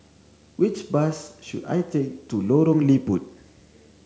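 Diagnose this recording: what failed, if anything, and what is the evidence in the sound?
The failure is in the analogue wiring: video or display buzz runs under the speech for the whole clip. The evidence is a steady buzz at 75 Hz, sitting well below the speech, roughly 35 dB down, with a layer of harsh hash above it. A 75 Hz fundamental matches a screen refresh rather than mains. Current from a monitor or video cable is coupling into the audio path, so the display's field rate is imprinted on the signal as an interference tone.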